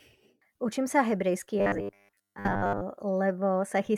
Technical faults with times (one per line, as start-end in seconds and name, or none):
1.59-2.82 robotic sound from repeated short buffers